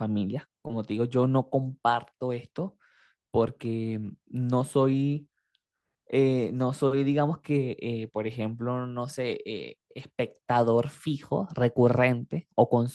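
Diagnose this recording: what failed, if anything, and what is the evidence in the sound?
The network stage failed briefly, with short concealed packet loss at 0.67 to 0.71 s. About 20 ms of speech never arrived in time. The decoder extended the preceding sound to bridge the hole, then blended back. This leaves a short smear or wobble.

Also at the network stage, there are lost packets rebuilt from error correction at 0.69 s, 8.27 s and 9.99 s. These spans run 20 ms, 40 ms and 40 ms, which fits one, two and two lost packets. The decoder played low-bitrate copies carried in following packets. Those stretches sound rougher and noisier, but nothing drops out.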